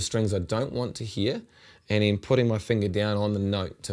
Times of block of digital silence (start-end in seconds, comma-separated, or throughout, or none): none